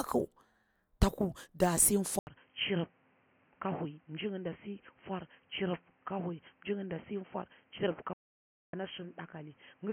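At 2.19 s the speech breaks for about 80 ms, and from then to the end it sounds like a different microphone. The band narrows, the level drops by roughly 10 dB, and a new noise floor sits about 35 dB below the speech. This pattern likely means the input switched to a poorer device. A codec or filter change would narrow the band alone. Here tone, level and noise all change together at one gap and never recover.

From 8.13 s to 8.73 s the output goes completely silent for about 0.6 s, and then the speech carries on. That points to a playback stall, likely caused by the player running short of data or being blocked. A dropout from packet loss would be much shorter and often repeated. This is one long hole, and the sound on both sides of it has the same narrowed tone and level as the section after the switch.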